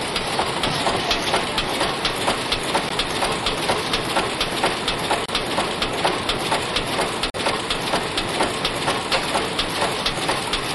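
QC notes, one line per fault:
2.89–2.91 s, 5.26–5.29 s and 7.30–7.36 s, Bluetooth dropout: three short holes of silence, growing from about 14 ms to 28 ms to 42 ms, steps that fit one, two and three lost wireless packets. These are likely packets that missed their delivery slot to the headphones. Unlike a buffer underrun or stall, the sound does not pause and continue from where it broke off. It resumes further along, as though it had kept playing through the gap.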